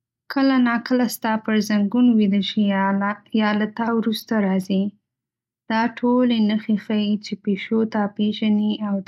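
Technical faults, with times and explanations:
No technical faults are audible.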